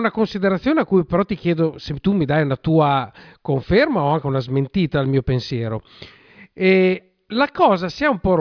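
Nothing technically wrong turns up anywhere in this short speech recording, so there's no fault here to pin to a time or trace back to a cause.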